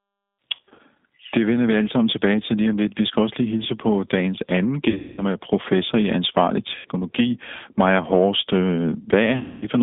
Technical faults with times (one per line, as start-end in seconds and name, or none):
0.00-9.83 G.729 codec
0.55-0.80 VoIP packet loss concealed by the speech codec
4.90-5.23 VoIP packet loss concealed by the speech codec
6.75-6.87 VoIP packet loss concealed by the speech codec
9.38-9.66 VoIP packet loss concealed by the speech codec